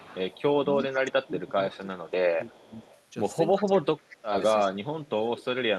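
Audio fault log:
0.00–0.42 s, 1.23–1.28 s, 1.72–1.77 s, 2.47–2.95 s, 3.60–3.64 s, 3.98–4.16 s, echo leak: a faint copy of the far side's voice returns 341 ms late, at about 20 to 30 dB below the main speech. It is most likely a loudspeaker-to-microphone path that the echo canceller did not fully cancel. On a spectrogram these appear as weak, smeared repeats of earlier harmonic patterns, shifted right by a fixed 0.34 s. In the waveform they show as low-level bursts.
0.58–2.87 s and 3.57 s to the end, speech suppressed in double talk: the near talker's level sags and breaks up while the other side is also speaking, dropping by roughly 15 dB across about two seconds in the first stretch and by roughly 25 dB in the second. This is likely the echo canceller clamping down because it cannot separate the talker from the returning echo. The waveform envelope shows abrupt dips and gaps. The audio passed through an Opus path with a 12 kHz band edge.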